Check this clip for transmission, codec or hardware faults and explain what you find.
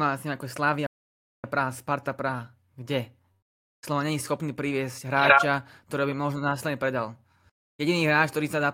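One fault is present: a playback stall in the speech from 0.86 to 1.44 s. The player likely either ran out of buffered data or had its output thread blocked, so for about 0.57 s nothing reached the output until playback recovered. The speech cuts off mid-flow into silence lasting over half a second, long enough to be clearly noticed, and then carries on once the player catches up.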